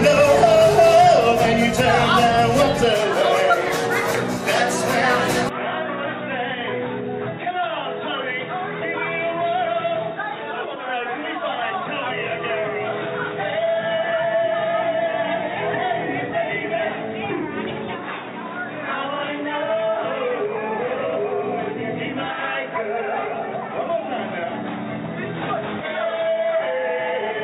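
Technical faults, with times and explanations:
5.49 s to end, input switched to a poorer device: with no gap, the sound turns dull and boxy, likely from a narrower-band microphone; the spectrogram is cut off at 3.8 kHz over a faint new noise floor, and the waveform shrinks about 10 dB.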